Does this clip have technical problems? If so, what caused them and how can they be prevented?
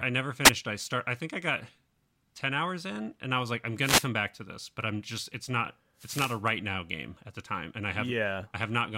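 Yes. Three short bursts of static interrupt the speech, at 0.44 to 0.50 s, 3.81 to 4.09 s and 5.97 to 6.41 s. Each is a brief swish of hiss, the last being the longest. These are wireless microphone noise hits: the FM radio link fades as reflected signals cancel, so receiver noise rises through the audio. To prevent them, use diversity receivers with good antenna placement and a clear line of sight.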